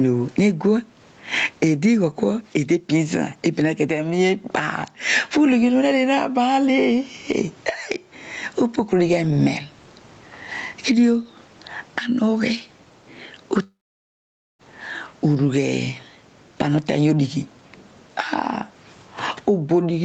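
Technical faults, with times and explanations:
throughout, gain pumping: quiet parts are pulled up and loud syllables pulled down, a swing of about 15 dB, likely from excessive gain hitting a fast limiter, unlike a gate's hard cut.
13.63–14.62 s, long network dropout: a brief fading fill, then about 0.87 s of silence before the speech resumes with nearly a second missing, likely lost packets over a stretch far longer than a single packet loss.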